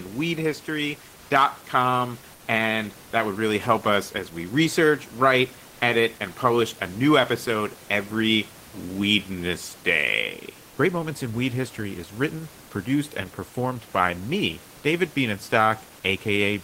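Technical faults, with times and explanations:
2.35–2.47 s: comfort noise in place of the background. For 120 ms the room noise, about 27 dB below the speech, gives way to a steady, featureless hiss about 3 dB quieter. The sender likely stopped transmitting during the pause, so the receiver filled it with synthetic noise.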